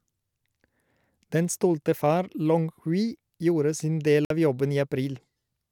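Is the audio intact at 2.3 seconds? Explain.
Yes, the speech is intact at 2.3 seconds, with no dropout, click, distortion or other fault at that moment.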